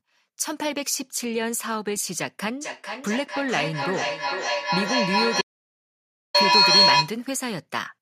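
A speech recording with a feedback howl building from 2.61 s to 7.21 s. The loop between a nearby loudspeaker and the microphone gains level on each pass, so the repeats grow into a tone near 4 kHz, pulsing about every 0.4 s and peaking at about 8 dB above the speech. From 5.42 s to 6.34 s there is an audio dropout to silence: 0.93 s of silence with no room tone, likely from a lost input such as a disconnect or accidental mute.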